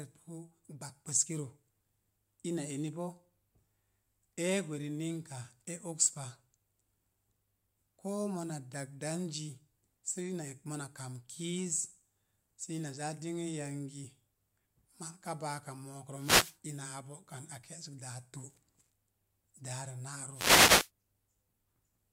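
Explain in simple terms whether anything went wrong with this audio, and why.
Two short bursts of static cut across the speech, at 16.14 to 16.58 s and 20.33 to 20.90 s. That's a wireless microphone noise hit: the radio link faded for a moment, so the receiver's own hiss briefly rose.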